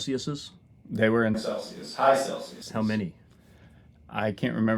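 At 1.35 s, just after "were in", the sound turns abruptly roomy and hollow, thinner in the bass and roughly 5 dB quieter, with room noise near 30 dB below the speech, until 2.62 s. This is likely a switch to a distant microphone after the close one dropped out.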